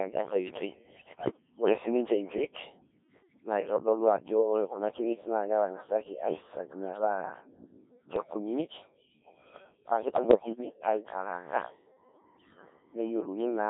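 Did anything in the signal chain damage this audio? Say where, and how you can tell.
Yes. Throughout, at the codec stage, the Codec 2 vocoder has heavily damaged this speech. It sounds robotic and buzzy, band-limited to about 300 Hz to 3.7 kHz, which fits a very low-rate mode near 1.3 kbit/s. Unlike ordinary compression smearing, the waveform is resynthesised from sine waves.

In transmission, bit errors on digital voice radio hit at 0.97 to 1.37 s, 8.16 to 8.34 s and 10.04 to 10.82 s, worst in the first burst. The voice jumps in pitch, level and timbre there and breaks into warbles and bleeps. These are short bursts on top of the steady vocoder buzz.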